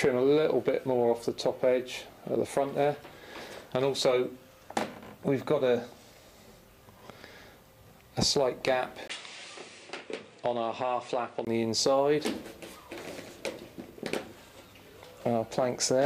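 From 9.08 to 11.47 s the sound turns duller and slightly quieter, losing everything above 9.8 kHz after a 20 ms gap, likely an input switched to a poorer device.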